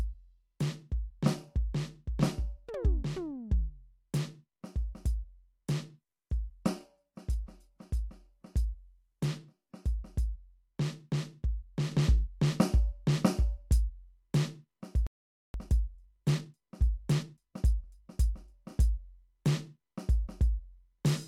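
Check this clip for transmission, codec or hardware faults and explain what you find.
Four faults affect this music clip, all after the first few seconds.

Adaptive stream at a lower bitrate, 5.90 to 9.90 s: the music abruptly turns thinner, with more codec artefacts, no gap and nothing above 19.2 kHz. This fits an adaptive stream dropping from 96 kbit/s AAC to a 24 kbit/s HE-AAC version.

Sudden gain jump at 11.92 s: the music and its background noise step up together by about 4 dB and stay louder to the end. The likely cause is a digital gain change applied without a ramp.

Playback stall, 15.07 to 15.54 s: the music cuts to silence mid-flow for about 475 ms, then resumes. The player most likely ran out of buffered data.

Time-compressed catch-up, 15.54 to 18.54 s: the music runs hurried at 1.15 times speed with unchanged pitch, as small pieces are cut and cross-faded to clear the backlog.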